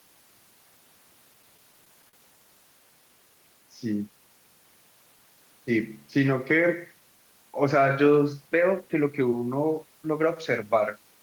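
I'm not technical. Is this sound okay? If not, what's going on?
No. From 1.33 to 2.15 s the speech stutters and drags, catching seven times. These are repeated stalls (stutter): the audio arrived late, so playback kept pausing briefly and stretching the last sound, in gaps up to 41 ms, adding about 0.1 s without losing anything.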